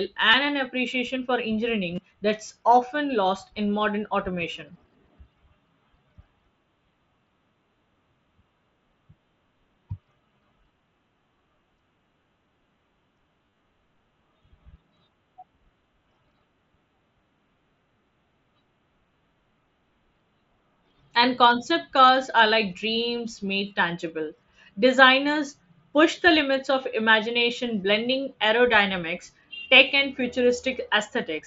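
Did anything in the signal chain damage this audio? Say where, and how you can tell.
Yes. Concealed Bluetooth headset packet loss, on the wireless link from headset to phone, at 0.31 s (just before "an appreciation for"), at 1.95 s (between "an appreciation for" and "that's often lost in"), and scattered through 13.46–13.59 s. Each gap is filled with a repeated stretch of the preceding waveform, which leaves a brief buzzy tone and a slight warble where real audio resumes. The first two fill about 22 ms each. The third is a cluster of losses totalling about 90 ms, with a longest run of about 30 ms. That is heard over the wideband mSBC headset codec, whose band stops at 8 kHz.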